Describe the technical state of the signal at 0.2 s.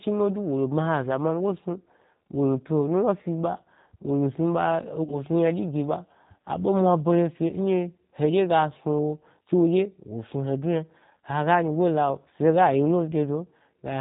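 At 0.2 s the speech already carries the G.729 codec damage that runs through the whole clip. Nothing above 4 kHz survives, and each 10 ms frame is rebuilt from a vocal tract filter, pitch predictor and a few pulses, which fits an 8 kbit/s rate. The result sounds plainly rough and synthetic rather than merely muffled, which separates it from a simple low-pass filter.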